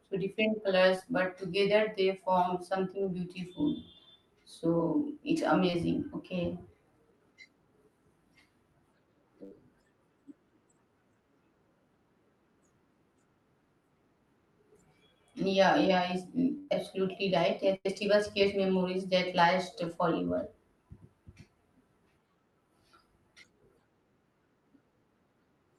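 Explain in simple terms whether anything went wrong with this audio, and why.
Something did go wrong. The speech has small gaps where bits of the call arrived too late and were patched over.

The first kind is short concealed packet loss. It happens at 0.96 s, between "so different" and "but together they form", then at 3.03 to 3.05 s, right after "but together they form". It happens again at 5.70 to 5.74 s and at 19.88 to 19.90 s. Each gap is tiny, 10 to 30 ms. The receiver guessed the missing bit by stretching the sound just before it. You hear a quick smear or wobble. A short consonant may drop out.

The second kind is a burst of packet loss. It occurs at 9.44 to 9.52 s, 16.58 to 16.69 s, and 17.76 to 17.86 s, just before "create memories that last". Here 70 to 100 ms went missing in one go. The receiver held the last sound and let it fade. That gives a brief buzz or hiss. Then the speech jumps ahead, and a small piece is simply gone. 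The call codec, which is Opus here, keeps the sound up to about 12 kHz, so the very highest tones are cut off.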